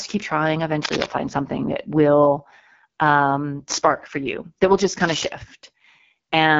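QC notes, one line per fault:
Throughout: AMR wideband (HD Voice) codec. The speech is rough and raspy, which fits the low 8.85 kbit/s mode, and there's nothing above about 7.5 kHz.
0.83–1.06 s and 4.99–5.28 s: cable scratch noise. Rustling bursts land after "keep trying" and "that will just", the first fairly loud, the second quieter. It's likely a worn connector being moved.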